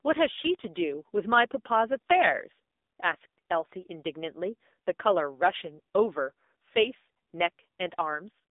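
From start to finish the speech carries AMR narrowband mobile codec damage. The line passes only about 250 Hz to 3.7 kHz, so it sounds thin and boxy, and the heavy buzzy, synthetic quality fits a low AMR-NB mode near 6.7 kbps, where a few pulses per subframe drive a vocal-tract model. On a spectrogram, energy stops at a hard ceiling near 3.8 kHz with bare floor above it, and harmonics look smeared and blocky in 20 ms steps.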